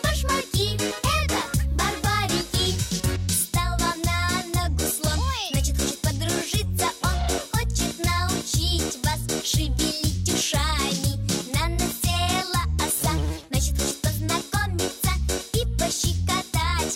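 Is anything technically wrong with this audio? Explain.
Yes. Periodic USB or driver dropouts occur from 11.91 to 15.92 s: a blocking task stalls the audio path once per second, leaving about half a millisecond of silence each time. The resulting gaps, roughly five in all, sound like evenly spaced ticks.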